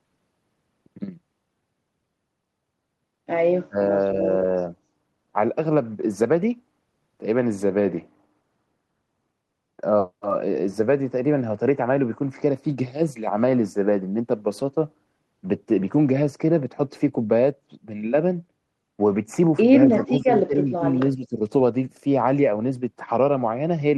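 At 3.68 to 3.79 s the speech briefly collapses, a very deep dip of about 40 dB that nearly silences it. Later it sags again in three longer stretches at 19.86 to 20.3 s, 20.46 to 20.85 s and 21.11 to 21.41 s, each pulled down by about 10 to 15 dB. This is likely speech suppressed in double talk: with both ends talking at once, the echo canceller mistook this talker for loudspeaker echo and turned it down.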